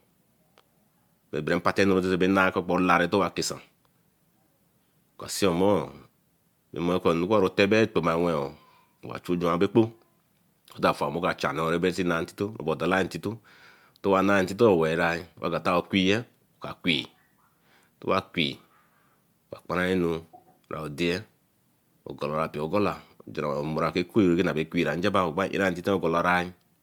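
Generation loss throughout, likely from about four MP3 encodes at 128 kbit/s: swirly, hollow speech, blurred attacks, and a spectrogram with holes, empty above 20.1 kHz.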